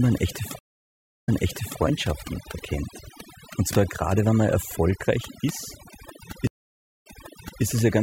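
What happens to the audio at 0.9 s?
At 0.9 s the audio is inside a stream reconnect spanning 0.59 to 1.80 s. The connection drops and the sound goes silent for 0.66 s. A fresh decoder then restarts mid-stream, and playback resumes about 0.55 s earlier than where it broke off, so a short stretch repeats.

Overdone noise removal runs through the whole clip, including this moment. The over-aggressive reduction pulls individual frequency bands down whenever they sit near its noise estimate. This strips quieter parts of the speech, leaving a lowered background that breaks up into twinkling specks.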